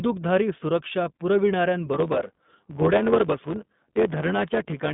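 Speech runs through an iLBC codec for its whole length. Nothing above about 3.8 kHz survives, the band sits roughly between 150 Hz and 3.6 kHz, and the coding roughness is plainly audible, which fits 20 ms frames at around 15.2 kbps. From 1.93 s to the end, a block size mismatch (truncated) adds a 91.9 Hz buzz and speeds the speech up by 1.07 with its timbre kept. The writing stage's blocks, which fit 512 samples, lose their tails before the next stage reads them.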